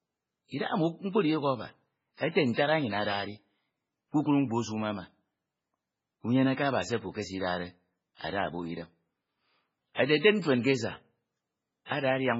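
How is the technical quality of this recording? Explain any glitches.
Quality is poor throughout the speech. For the whole clip the audio has nothing above 7.6 kHz and a heavily watery, swirling texture, with chirpy s sounds and smeared onsets. The likely cause is MP3 compression at a very low bitrate, around 16 kbps: the starved encoder cuts the treble and drops weak frequency components that flicker between frames.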